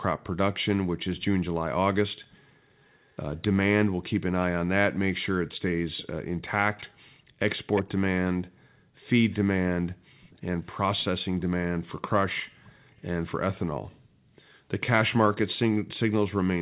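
A delayed copy of the speech trails the talker at 2.31–3.16 s, 5.52–6.84 s, 7.75–8.31 s and 9.3–12.92 s, lagging by 380, 351, 351 and 414 ms. It is very quiet in the first and last stretches and plainly audible around 7.75 s. This is likely an echo leak, where a loudspeaker far end's echo canceller let part of its microphone pickup return. From 7.19 to 7.39 s the room sound dips by about 21 dB for a fifth of a second, as background gated by the echo canceller clamped the microphone during playback.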